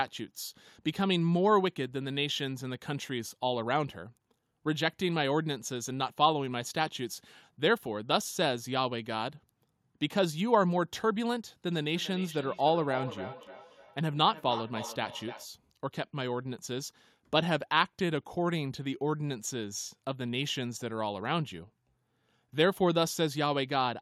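A speech recording carries a DC offset from start to finish: the whole waveform sits shifted off zero by a constant amount. Unlike mains hum or rumble, it has no pitch and no audible tone. It shows only as steady energy at the very bottom of the spectrum and as lost headroom on one side of the waveform, so a high-pass filter or offset removal clears it without touching the voice. From 11.7 to 15.51 s there is feedback echo between two devices. Two endpoints on the same call are sharing a room, so one device's loudspeaker output is caught again by the other's microphone, and neither echo canceller removes sound it did not play itself. The repeats arrive at a fixed spacing of about a third of a second and peak at about 12 dB below the speech, each pass thinner and more ringing than the last. That regular, recirculating spacing and the progressive thinning set it apart from ordinary room reverberation, which smears continuously rather than returning in distinct copies, and from a single-device echo, which comes back once.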